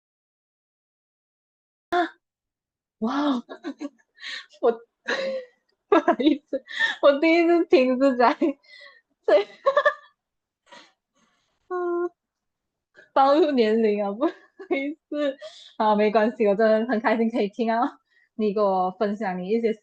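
Cut-off start at 1.93 s: this speech clip opens with digital silence until 1.93 s, then the speech enters mid-sound with no natural attack or fade-in, because the recording or stream began late and missed the start of the utterance.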